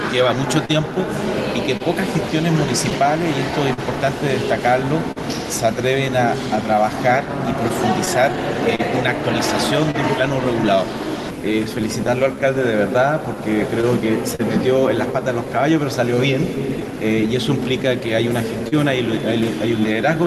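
Call audio that's gone through an Opus-style codec, with the top end stopping around 12 kHz, which fits a modest call bitrate in the 32 kbps range. Underneath it all there's clock drift between sender and receiver. The sender's clock runs roughly 3% slow, so the receiver keeps running short of material and has to stretch things to keep playing. You get that faint, unsteady feel through the whole clip rather than at one spot. Those show up as repeated timing corrections from 3.03 s to the end at 20.25 s. The playout runs at about 99% speed, padding in something like 150 ms overall through small repeats. They're all in the same direction but unevenly spaced, so the pace wobbles slightly instead of clicking. On top of that there are scattered short gaps where packets didn't arrive in time and the receiver filled each hole by carrying on the last bit of sound. Between 0.65 s and 9.96 s there are about ten of them, around 300 ms filled in total, the longest near 50 ms. 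From 12.07 s to 14.41 s there are three more and from 16.43 s to 18.74 s another five, each of those later runs filling about 70 ms with gaps up to roughly 40 ms. They come through as little ticks and smears.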